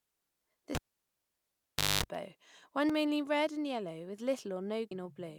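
At 0.75 s the cable is pulled and plugged in while live. A pop cuts the speech, then near silence for about 1.24 s. A 50 Hz mains buzz lasts about 0.23 s as the plug tip touches first. Another pop at 2.04 s brings the sound back.

At 2.90 s, just before "mainly red and yellow", damaged data in the compressed stream gives a brief glitch. The decoder misreads a corrupt frame and loses sync. It skips ahead to the next frame header. The same glitch recurs at 4.91 s.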